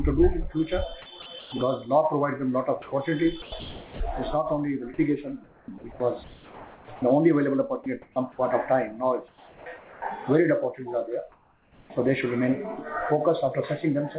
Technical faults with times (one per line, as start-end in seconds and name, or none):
1.22-1.52 sound chopped by the voice detector
2.82-4.00 sound chopped by the voice detector
5.44-7.02 sound chopped by the voice detector
7.84-7.86 sound dropped by the voice detector
7.84-8.16 comfort noise in place of the background
9.28-10.02 comfort noise in place of the background
11.32-11.90 comfort noise in place of the background
11.86-11.90 onset clipped by the voice detector